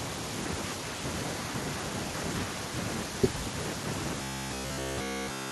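From 4.22 s to 5.51 s the speech collapses into a rigid, metallic drone with a fixed buzz at about 67 Hz, still loosely tracing the syllables. This robotic sound from repeated short buffers likely comes from audio arriving too seldom, so the software loops the last 15 ms slice over and over, which sets that 67 Hz pitch, while the real audio in that stretch is essentially all replaced and skipped.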